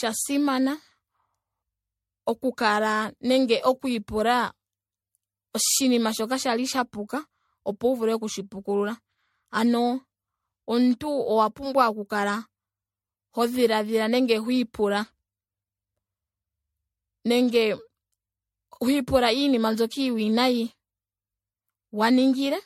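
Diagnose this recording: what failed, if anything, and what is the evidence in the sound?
Swirly, hollow speech with smeared attacks and nothing above 16.5 kHz throughout points to likely generation loss at the codec stage, from several repeated MP3 encodes near 60 kbit/s.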